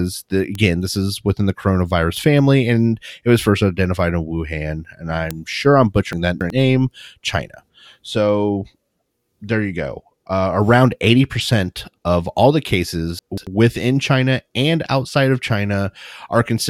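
At 0.55 s, 2.17 s and 5.31 s the speech carries three isolated bit error spikes. Each is a single corrupted sample where one flipped bit pushed the value up or down by a power of two before it snapped back. Each spike is a dry, sharp tick that has nothing to do with the surrounding speech. On the waveform it shows as a lone vertical line standing out from the envelope. On a spectrogram it is a thin broadband stripe running from the lowest to the highest frequencies.

From 6.13 to 6.50 s the chunks are out of order. A block of about 93 ms was delivered three blocks late, so it plays after material that should have followed it. The same fault recurs from 13.19 to 13.47 s, this time with the block two positions late. In both places the speech briefly sounds jumbled. On the waveform, three abrupt discontinuities mark the seams. On the spectrogram, vertical broadband edges appear where formant tracks jump instead of flowing smoothly.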